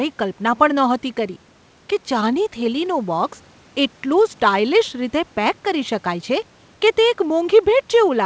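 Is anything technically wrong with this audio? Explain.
No, nothing is technically wrong: the room noise sits about 36 dB below the speech, and the call-codec path behaves as a wideband link with nothing above 8 kHz, consistent with G.722 at 64 kbps.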